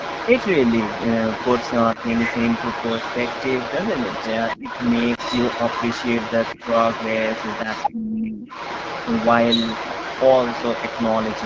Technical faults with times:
0.00-11.46 AMR wideband (HD Voice) codec
0.00-7.92 other side's voice leaking through
4.58-4.69 speech suppressed in double talk
5.15-5.20 lost AMR speech frames
7.92-8.47 speech suppressed in double talk
8.47-11.46 other side's voice leaking through

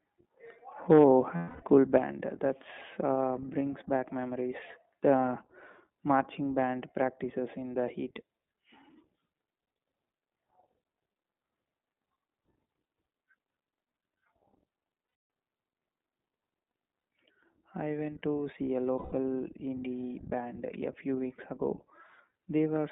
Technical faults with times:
0.00-22.91 iLBC codec
0.90-1.04 microphone overload
0.98 microphone volume stepped down
1.36-1.63 lost iLBC frames
1.98 microphone volume stepped down
15.07-15.29 lost iLBC frames
16.98-17.04 lost iLBC frames
18.98-19.14 lost iLBC frames

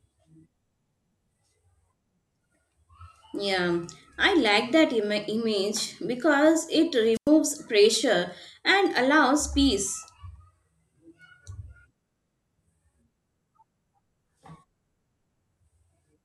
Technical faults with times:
7.13-7.29 wireless microphone squelch dropout

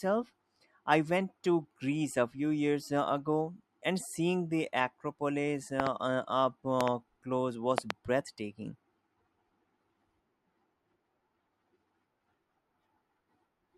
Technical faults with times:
5.80-5.89 loud pop
6.81-6.90 loud pop
7.78-7.92 loud pop

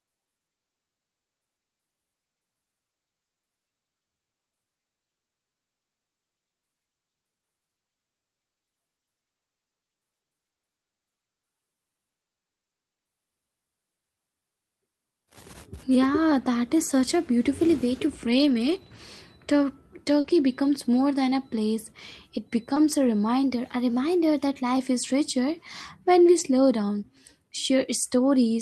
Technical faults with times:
17.54-18.07 drift correction step
18.30-18.96 lost packet rebuilt from error correction
20.20-20.26 short concealed packet loss
20.24-20.30 lost packet rebuilt from error correction
22.74-22.78 short concealed packet loss
22.76 lost packet rebuilt from error correction
23.44-24.77 drift correction step
26.39 lost packet rebuilt from error correction

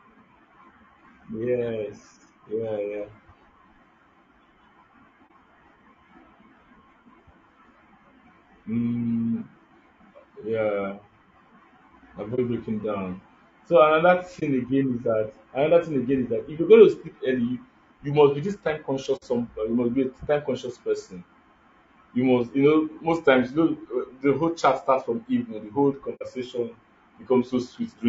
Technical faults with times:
0.00-28.09 low-delay AAC compression
5.27-5.31 AAC frame loss with muting
12.35-12.39 AAC frame loss with muting
14.39-14.43 AAC frame loss with muting
19.16-19.23 AAC frame loss with muting
26.15-26.23 AAC frame loss with muting

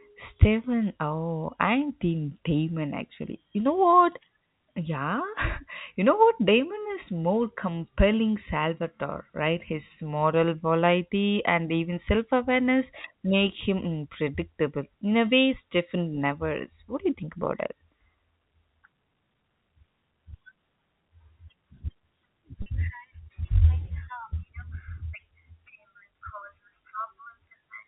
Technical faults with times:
22.62-22.66 packet loss with pitch repetition

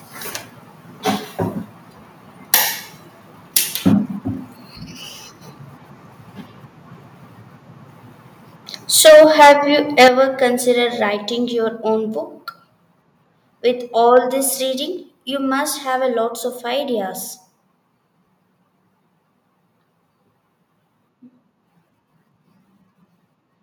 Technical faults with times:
2.53-2.55 microphone overload
3.56-3.58 microphone overload
8.98-9.53 microphone overload
9.07 microphone volume stepped down
9.98-10.08 microphone overload
10.08 microphone volume stepped down
14.16 microphone overload

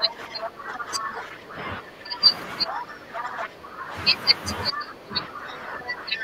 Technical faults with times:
0.00-2.22 speech suppressed in double talk
0.42-0.49 other side's voice leaking through
0.75-1.09 other side's voice leaking through
2.65-3.95 speech suppressed in double talk
3.16-3.45 other side's voice leaking through
4.71-6.23 speech suppressed in double talk
4.75-4.82 other side's voice leaking through

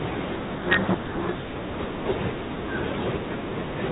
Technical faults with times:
0.54-1.49 codec payload misread

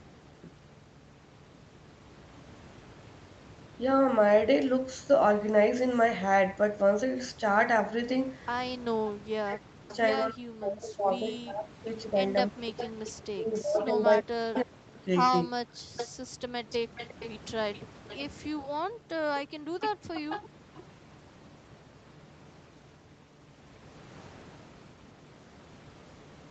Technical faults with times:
8.78-15.49 speech suppressed in double talk
9.88-9.96 echo leak
12.77-20.84 echo leak
15.62-22.38 background gated by the echo canceller
25.20-25.25 echo leak

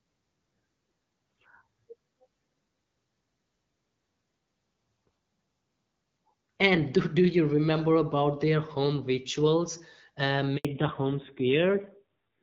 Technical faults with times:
10.57-10.65 handover gap
10.65-12.42 fallback to narrowband

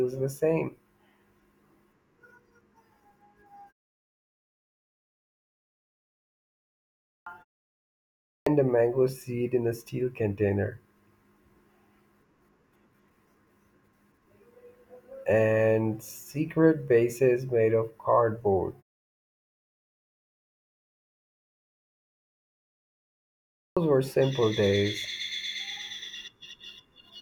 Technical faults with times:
7.08-7.26 clipped start after a pause
8.28-8.46 clipped start after a pause
23.57-23.77 clipped start after a pause

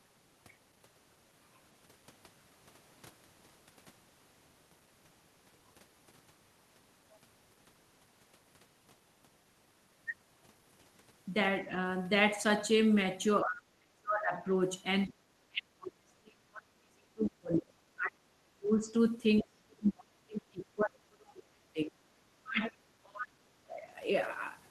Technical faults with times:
13.43-14.36 speech suppressed in double talk
15.09-15.13 other side's voice leaking through
15.48-18.89 speech suppressed in double talk
19.41-21.95 speech suppressed in double talk
22.35-23.80 speech suppressed in double talk

